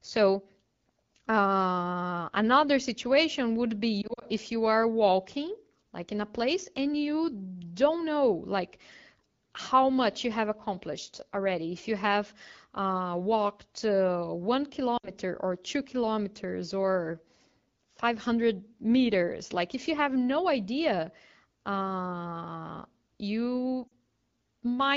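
At 4.02 s, after "another situation would be", lost AMR speech frames leave the sound briefly warbling and dipping until 4.24 s, just before "if you are walking". About 100 ms of frames failed and were concealed, scattered over 200 ms with no run longer than 40 ms, each gap bridged by the decoder's fading repeat of the last good frame. Shorter dropouts follow at 14.97 to 15.12 s, before "or two kilometers or", and at 23.87 to 23.92 s, after "no idea uh you", each a short rough blip.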